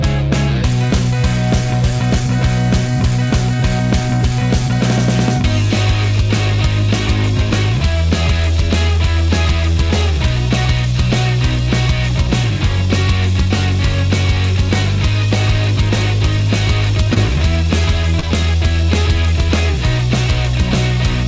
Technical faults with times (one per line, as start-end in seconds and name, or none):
17.14-17.18 short concealed packet loss
18.20-18.24 short concealed packet loss